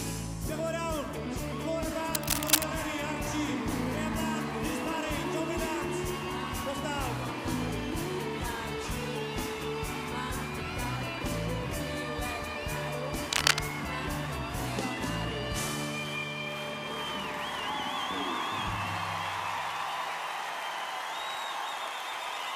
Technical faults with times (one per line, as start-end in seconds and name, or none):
2.14-2.63 cable scratch noise
13.33-13.61 cable scratch noise